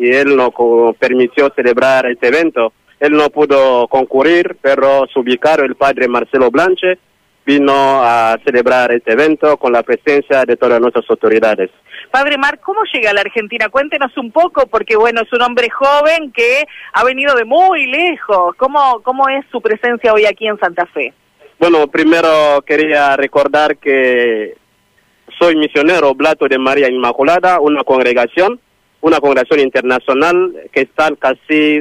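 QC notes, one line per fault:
No technical faults detected.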